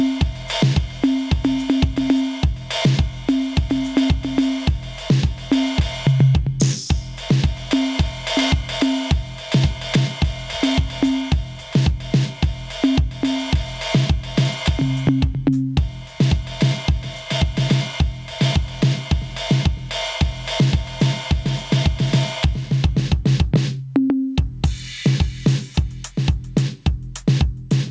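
Gain pumping runs through the whole music clip, likely from input gain set far too high with a fast limiter clamping it on each loud passage. The level swings by roughly 15 dB, squashing dynamics within a band ending at 8 kHz.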